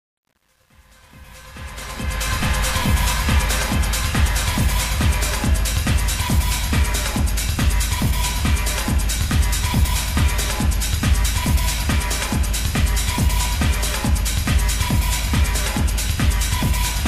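Truncation distortion on a fade, 0 to 2.35 s, worst before 1.66 s: the undithered fade-in collapses into gritty square steps, which fits roughly 9-bit resolution.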